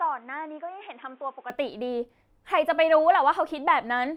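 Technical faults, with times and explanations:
0.0–1.5 s input switched to a poorer device: dull, nothing above 3.8 kHz, about 10 dB quieter with faint new noise, clearing gaplessly; likely a device change, as level and noise shift too, unlike plain filtering.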